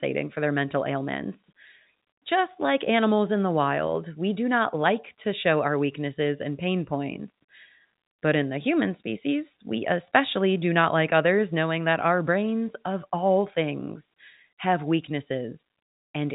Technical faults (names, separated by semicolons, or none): none